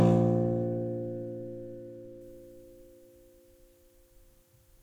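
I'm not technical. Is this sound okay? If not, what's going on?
No. From about 2.21 seconds to the end, the sound has pre-emphasis left on. Some audio is recorded with its high, hissy frequencies deliberately turned up, and a player should turn them back down. Here that second step was skipped. The boost matches the one used on some CDs. So the last part sounds thin, overly bright and sharp, with hissy, sizzling high tones that stand out too much.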